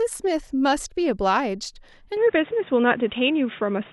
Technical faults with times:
2.17-3.92 input switched to a poorer device

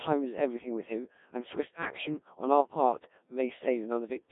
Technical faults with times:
0.00-4.32 Codec 2 vocoder

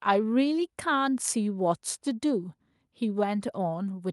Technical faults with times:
none

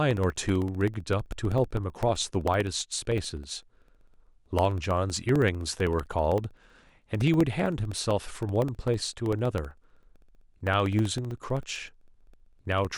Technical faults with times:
0.11-12.91 periodic USB or driver dropouts

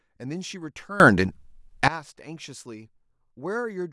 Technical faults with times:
1.00-1.88 sudden gain jump

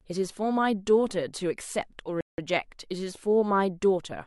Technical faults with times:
2.21-2.38 rebuffering stall

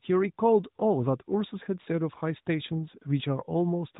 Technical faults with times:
none

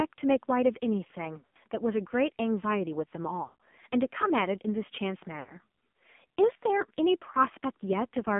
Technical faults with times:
0.00-8.39 AMR narrowband mobile codec
1.38-1.57 lost AMR speech frames
3.44-3.56 lost AMR speech frames
5.40-5.56 lost AMR speech frames

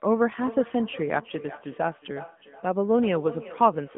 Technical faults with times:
0.00-3.98 AMR narrowband mobile codec
0.38-3.98 feedback echo between two devices

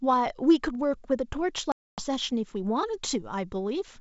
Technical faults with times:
1.72-2.01 packet loss on an ADPCM call

